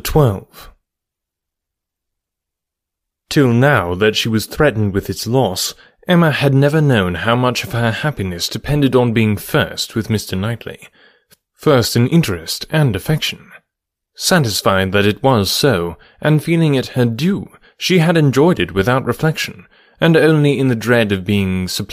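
A speech recording with nothing technically wrong with it.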